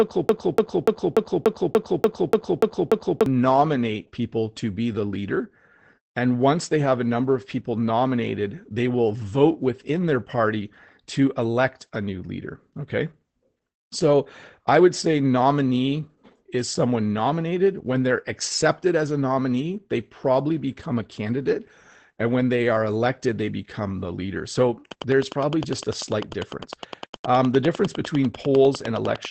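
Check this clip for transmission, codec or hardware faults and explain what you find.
Three faults are audible: constant codec damage, a stuck loop at the start, and a click train at the end.

Opus voice compression, throughout: the speech sounds muffled, slightly hoarse and a little robotic, with nothing above about 8.6 kHz. That points to the SILK coder in wideband mode, where coarse excitation coding at low rates causes this roughness, consistent with roughly 12 kbps and 20 ms frames.

Broken-record loop, 0 to 3.26 s: the clip opens mid-stutter, with a fragment of about 0.29 s repeating exactly and back to back, ten times. The likely cause is a stalled player or stream re-sending its last buffered fragment, so the real audio for those seconds is gone.

Train of clicks, 24.92 s to the end: evenly spaced ticks arrive at about 9.9 per second, around forty in all, peaking about 10 dB above the speech and audible in the pauses. 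This is likely interference or a struggling interface injecting a repeated pulse.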